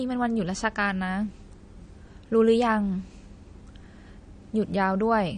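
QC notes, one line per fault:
Throughout, MP3 compression: the speech has a watery, swirling texture, with nothing above 9.6 kHz, so sibilants come out dull and metallic, and consonant onsets blur. This fits a low bitrate, around 40 kbps, and is likely MP3 encoding starved of bits: the encoder discards the top band at a fixed cut-off and drops quieter frequency components, which flicker on and off between frames and leave that unstable, underwater character.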